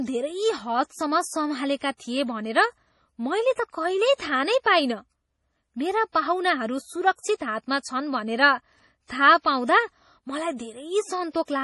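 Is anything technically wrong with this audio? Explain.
Yes. Throughout the speech, likely MP3 compression at a starved bitrate, which fits about 32 kbps, cuts everything above 11.5 kHz and zeroes weak frequency lines that flicker between frames. The result is heavy damage: dull treble, a watery, swirling texture, metallic chirps on s sounds, and smeared attacks.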